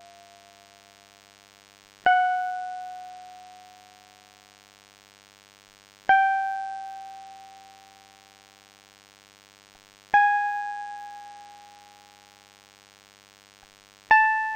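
From the start of the music to the end, a DECT cordless phone buzz sits underneath it: a thin, steady buzz at 100 Hz with a dense row of harmonics above it. A nearby DECT handset or base station transmits a brief radio burst every 10 ms, and the audio circuitry rectifies that RF into an audible pulse train. The buzz is about 30 dB below the music, so it stays faint but never stops.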